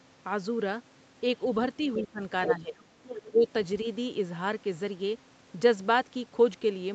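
It's a speech clip with the other side's voice leaking through at 1.83–2.04, 2.45–2.53, 2.78–2.83 and 3.04–3.29 s, likely a loudspeaker echo the canceller didn't fully remove, ranging from faint to roughly as loud as the talker. Right alongside that, there's speech suppressed in double talk at 2.03–2.21, 2.47–2.76 and 3.26–3.47 s, where the talker dips by about 15, 5 and 15 dB, likely while both sides overlap.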